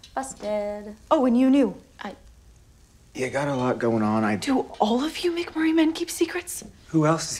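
No technical faults occur at any point in the clip.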